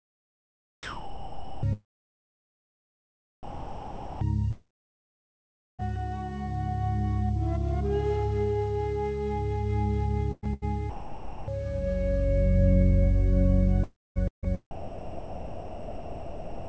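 Sound dropped by the voice detector occurs at 0.83 to 1.63 s, 3.43 to 4.21 s and 10.90 to 11.48 s, for 0.8 s, 0.78 s and 0.58 s. Each time the audio gives way to a steady, even hiss and returns only when the detector reopens. The likely cause is the sender's voice detector judging a quiet passage to be background and stopping transmission, with the receiver filling the gap with comfort noise.

A long network dropout follows at 4.51 to 5.81 s, likely from no packets arriving for about 1.28 s. The last sound carries on briefly as a fading buzz, then roughly 1.16 s of near silence sits where the audio should be, and the sound resumes later with that stretch gone.

Sound chopped by the voice detector appears at 10.32 to 10.64 s and again from 13.84 s to the end at 16.68 s, where about 2.44 s is replaced in pieces. The audio turns choppy, with quiet edges cut away. This likely comes from the detector switching transmission on and off repeatedly. 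Throughout, nothing is heard above 8 kHz, which points to the G.722 call codec at 64 kbps.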